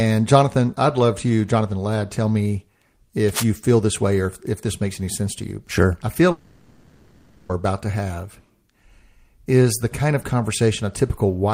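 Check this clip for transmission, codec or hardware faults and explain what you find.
Two faults turn up in this speech clip, one in the hardware path and one in transmission.

From 3.29 to 3.44 s there is cable scratch noise: a dense, ragged rustle nearly as loud as the speech, likely from a worn connector whose contact resistance jumped around. Its uneven texture sets it apart from a single clean click.

From 6.31 to 7.51 s comes a long network dropout. For about 1.2 s no new audio arrives, and the gap is filled by a buzzy continuation of the last sound rather than falling silent. Speech then resumes further on with that stretch missing. The likely cause is lost packets, and the length of over a second distinguishes it from a brief glitch.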